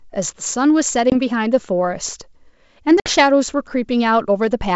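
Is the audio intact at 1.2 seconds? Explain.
No. Packet loss on an ADPCM call leaves a hard-edged hole from 1.10 to 1.15 s, where roughly one packet of audio was lost. That is about 20 ms replaced by silence. The decoder's adaptive predictor and step size then drift out of step with the sender's. So the speech returning just before 1.2 s comes back slightly distorted. It settles within some tens of milliseconds.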